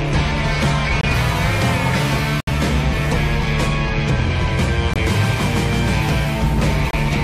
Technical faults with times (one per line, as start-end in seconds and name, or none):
1.00-1.05 corrupt frame muted
2.40-2.48 corrupt frame muted
4.93-4.97 corrupt frame muted
6.91-6.95 corrupt frame muted